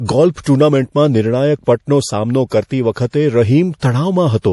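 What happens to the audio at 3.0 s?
Around 3.0 s the speech is bracketed by two brief smears of hiss: one from 2.93 to 2.96 s, about 27 ms long, and another from 3.10 to 3.13 s, about 33 ms, each arriving just before a sharp onset and blunting it. This is pre-echo. A transform codec spreads its quantisation noise across a whole block, so when an attack lands late in the block, noise sized for the loud part spills into the quiet instant before it.

Underneath, the sound has a watery, swirling quality with a plainly audible loss of detail, and nothing remains above 11.4 kHz. This is MP3 compression, with the damage pointing to a low bitrate of around 48 kbps. Short of bits, the encoder cuts the treble at a fixed frequency and drops weak frequency lines, which then flicker in and out from frame to frame. That same block-based coding is the likely source of the pre-echo at these two points.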